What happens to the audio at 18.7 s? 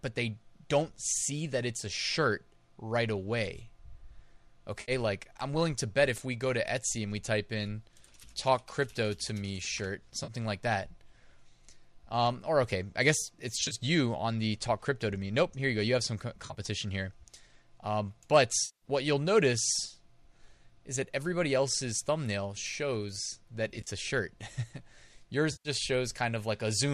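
At 18.7 s there is AAC frame loss with concealment. It runs from 18.65 to 18.86 s, just before "what you'll notice". About 170 ms of coded audio is missing, which fits a run of roughly 17 lost frames. The decoder does not go silent. It rebuilds the gap from the last good spectrum, with reshuffled phase and estimated energy. The result is a brief smeared, phasey patch where the real sound should be.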